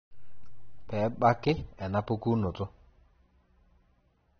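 From the first moment to the last, the speech has a dull, band-limited sound, with nothing above about 6.3 kHz, and the damage is easy to hear. That points to AAC compression, likely AAC-LC at a low rate, something around 27 kbps. At that rate the encoder drops the top of the spectrum and quantises what's left coarsely, so sibilants lose their edge and come out smeared, with a watery, fizzy texture instead of crisp detail.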